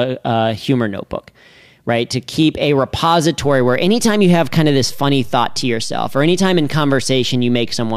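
Speech, with a DC step at 3.43 s. The zero line of the waveform jumps by about -25 dBFS and stays offset to the end. The jump sounds as a low thump while the speech continues unchanged. A converter recalibrating or an offset input being switched in would cause it.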